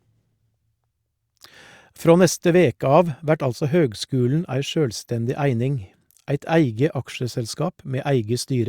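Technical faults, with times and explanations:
No technical faults are audible.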